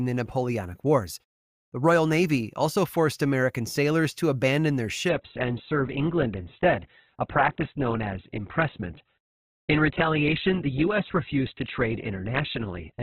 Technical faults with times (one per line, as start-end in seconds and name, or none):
5.09-13.03 adaptive stream at a lower bitrate